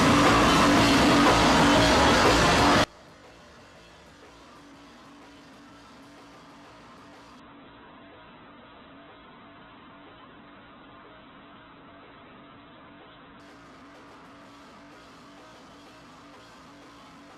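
From 2.84 s to the end, the audio collapses by about 30 dB into a faint residue, likely one channel inverted in polarity and cancelling on a mono sum. Then from 7.40 s to 13.40 s an adaptive stream at a lower bitrate kicks in. Nothing above 4.1 kHz survives, with harsher codec artefacts that suggest a very low bitrate.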